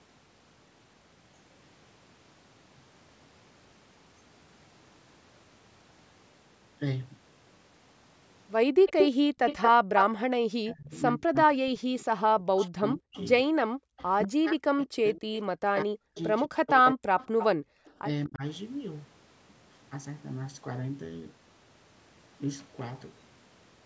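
Background gated by the echo canceller first appears at 8.69 to 8.82 s. While the far end's audio was playing from a loudspeaker, the canceller pulled the microphone down by about 40 dB. The room sound drops away for roughly a tenth of a second and then snaps back. It does the same at 10.24 to 10.33 s, about 38 dB for a brief moment, and again at 17.32 to 17.93 s, about 40 dB for close to half a second.

Echo leak follows at 8.86 to 10.04 s. A copy of the sound returns 189 ms late at roughly the same level as the speech, so the doubling is obvious. This is likely because the loudspeaker side's canceller failed to remove what its microphone picked up. Longer leaks come at 12.6 to 14.82 s, delayed 210 ms and about 20 dB down, and at 16.15 to 17.92 s, delayed 226 ms and about 10 dB down. These are faint and then clearer trailing copies.

Speech suppressed in double talk spans 10.63 to 17.04 s. 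The talker's voice dips and cuts out in pieces, by up to around 40 dB, totalling about four seconds. This is likely because both sides spoke at once and the canceller turned everything down. A shorter dip of about 20 dB occurs at 18.27 to 18.43 s.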